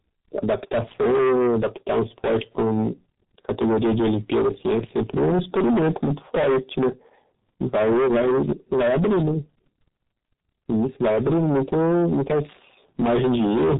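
Speech heard through two faults that run the whole way. The first is hard clipping from a stage driven about 17 dB past what it can pass. The peaks are sliced flat, and nearly a third of the waveform sits pinned at the ceiling, so the waveform looks like a row of blocks with squared tops. Every loud syllable turns into a harsh, fuzzy buzz. On a spectrogram the flat tops show as dense vertical smears of harmonics reaching up the spectrum on each stressed sound. The second is heavy G.723.1 codec damage. Its narrow, hoarse, muffled quality fits a coding rate near 6 kbit/s. Nothing survives above 3.8 kHz, which shows as a sharp horizontal ceiling on the spectrogram with blank space above it. Below that line, the slow 30 ms frame updates leave blocky, smeared formant bands. Consonants blur into one another and lose their crisp onsets.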